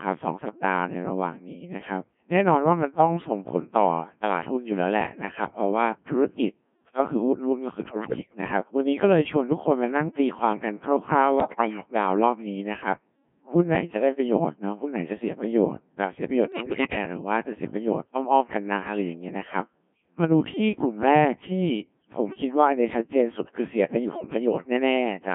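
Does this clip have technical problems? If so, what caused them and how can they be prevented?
Yes. Throughout, the speech sounds robotic and buzzy, squeezed into a narrow band of roughly 150 Hz to 3.4 kHz, with heavy damage to its texture. This is the Codec 2 vocoder at work. Rather than keeping the waveform, it sends only pitch, voicing, energy and a coarse spectral shape, and the decoder rebuilds the voice from sine waves. The heavy smearing fits a very low rate of around 1.3 kbit/s. Recording or relaying through a higher-rate codec that preserves the waveform would avoid this.

There are four bursts of bit errors on digital voice radio, at 7.89–8.41 s, 11.40–11.86 s, 16.52–16.98 s and 24.08–24.26 s. In each one the voice breaks into warbling, bleeps and garbled robotic sounds, with sudden jumps in pitch, level and tone. Corrupted bits reached the decoder, at a rate somewhere between several percent and about a tenth of all bits. 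Because each bit of this vocoder helps set the pitch, loudness, voicing or spectrum of a whole frame, every flipped bit throws that frame off. Staying well inside radio coverage, or using stronger error correction, would prevent these bursts.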